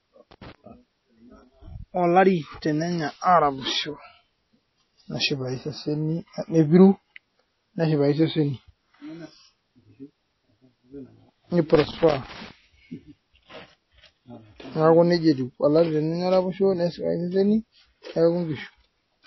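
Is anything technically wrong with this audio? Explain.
Yes. Two problems are audible in this speech recording.

Throughout, the audio is band-limited, with nothing above about 5.8 kHz, and carries plainly audible watery, swirling artefacts. This is likely MP3 compression at a low bitrate, consistent with roughly 24 kbps. Starved of bits, the encoder discards weak frequency lines, which flicker in and out between frames, and it removes the treble outright. A spectrogram would show a hard ceiling near 5.8 kHz and patchy, blocky holes in the upper bands.

Loose connector crackle occurs twice, from 0.31 to 0.55 s and from 11.75 to 12.51 s. A worn or dirty contact rapidly makes and breaks, chopping the signal and adding pops where any DC offset jumps. It sounds like an irregular burst of scratching. On the waveform these spans show jagged, spiky discontinuities. On a spectrogram they appear as scattered vertical broadband streaks.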